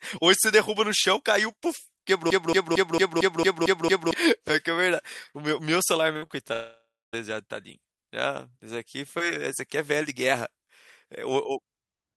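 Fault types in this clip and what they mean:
Broken-record loop: from 2.30 to 4.14 s a 226 ms fragment repeats eight times, likely from a stalled player, and the waveform shows identical blocks tiled back to back.
Repeated packet loss (robotic sound): between 6.13 and 6.31 s, four holes up to 50 ms are patched by stretching sound, giving choppy robotic texture and smeared spectrogram streaks.
Long network dropout: from 6.53 to 7.15 s about 0.6 s is lost, likely to a network outage. A fading buzz smears on the spectrogram before a flat, silent waveform.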